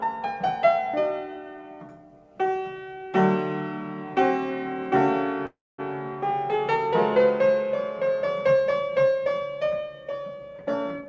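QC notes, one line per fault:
5.46–5.80 s, call audio freeze: The sound stalls for about a third of a second. The last sound is carried on briefly as a fading buzz or hiss, then about 220 ms of silence follows. Delayed packets likely left the jitter buffer empty, so the receiver filled the wait. When the audio resumes, it picks up exactly where it stopped. Nothing is lost, but a 324 ms gap is inserted and the delay grows by that much.
10.58–11.08 s, jitter buffer speed-up: The final half second runs at about 126% speed with no change in pitch. It sounds hurried. The buffer held more audio than its target, so the receiver trimmed short pitch-period pieces again and again, roughly 150 ms in total, to pull the delay back down. This sits on the G.722 call path, where nothing above 8 kHz is present.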